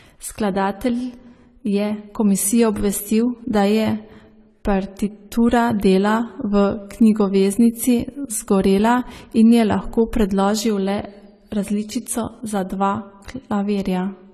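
AAC compression throughout: nothing above 14 kHz and plainly audible smearing, likely from coarse quantisation at a low bitrate, which fits about 32 kb/s.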